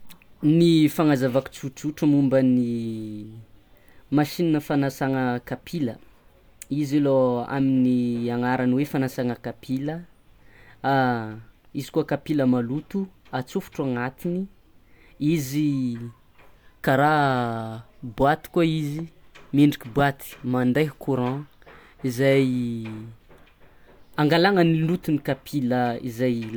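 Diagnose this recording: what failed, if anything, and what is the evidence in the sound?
Nothing failed here: I listened through the whole recording and found no dropouts, glitches or other faults anywhere in the chain.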